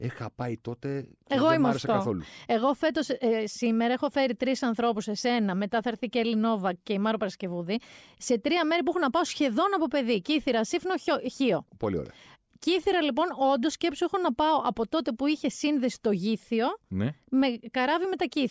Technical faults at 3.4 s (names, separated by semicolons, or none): none